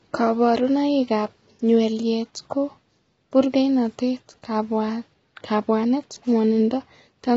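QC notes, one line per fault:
Throughout, low-delay AAC compression: the speech sounds rough and grainy, with a hissy fizz filling the gaps between the harmonics, and nothing comes through above about 7.8 kHz. That's likely an AAC-ELD encoder running short frames, which can't separate the pitch harmonics cleanly and burns bits doing it. The damage is heavy enough to point to a bitrate around 16 kbps, so noise spills in and the top band gets lopped off.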